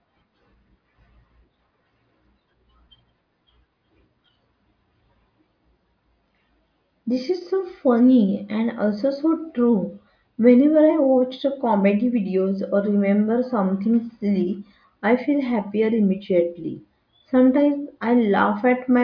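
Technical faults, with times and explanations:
No technical faults can be heard in this speech recording.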